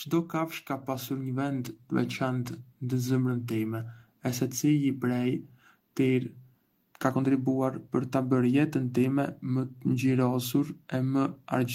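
Automatic gain rising from 0.67 to 2.62 s: the gain control judged the incoming speech too quiet and lifted its gain by about 6 dB over roughly two seconds, so voice and background noise swell together in a slow, even climb.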